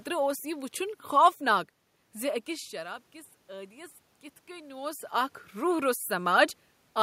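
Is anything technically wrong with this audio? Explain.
Yes. From 2.45 to 4.98 s there is automatic gain rising. The input level dropped by about 16 dB as the talker moved away, and the gain control slowly added about 4 dB to compensate. Voice and room noise swell together over those two and a half seconds. On a waveform the envelope climbs gradually, and on a spectrogram the noise floor brightens along with the speech.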